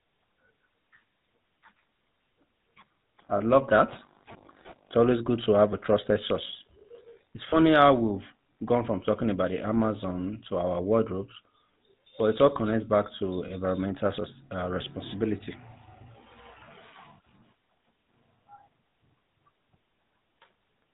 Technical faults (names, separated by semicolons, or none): GSM full-rate codec; lost GSM frames